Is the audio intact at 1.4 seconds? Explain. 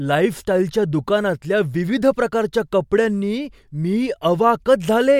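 Yes, the audio is intact at 1.4 seconds, with no audible fault in the speech at that point.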